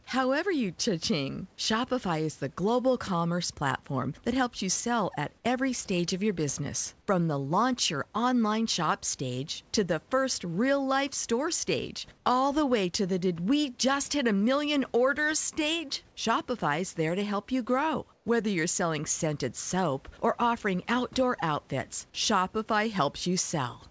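Discontinuous transmission likely cut off the sender, so the receiver substituted comfort noise in place of the background. After "real life store stage" at 12.18 to 12.26 s, and after "to help you grow" at 18.14 to 18.26 s, the background briefly turns flat and featureless, about 1 dB and about 3 dB quieter respectively.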